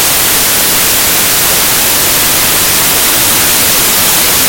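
From start to finish the audio shows a wrong sample width fault. The sound fits packed 24-bit samples being read back as 16-bit ones, so byte boundaries fall in the wrong places and most values are assembled from mismatched bytes. Only a fraction carry the true high-order bits. The result is loud, dense noise with the original sound buried underneath, playing at 0.667 times normal speed and pitched down by about seven semitones.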